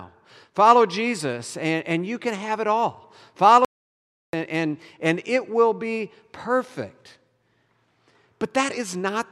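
At 3.65 s, right after "can have it all", the speech cuts to dead digital silence with no room tone until 4.33 s, resuming on "and and and it". This audio dropout to silence removes about 0.68 s, likely from a lost input while zeros kept being written.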